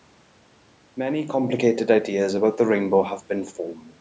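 No technical faults can be heard anywhere here.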